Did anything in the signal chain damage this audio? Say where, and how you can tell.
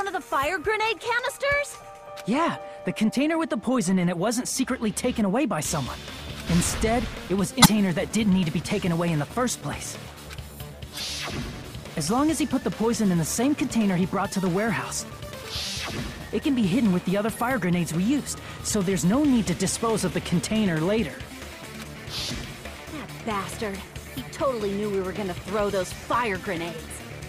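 Yes. Damaged data in a compressed stream appears three times, at 7.62–7.66 s, 10.96–11.00 s and 22.27–22.32 s, each a brief burst of roughly 45 ms. This is a codec-stage fault. Part of the encoded file or stream was corrupted, so the decoder misreads or rejects the affected frames, loses sync and hunts for the next valid frame header. Each time, this is heard as a chirp, squawk, click or short hole.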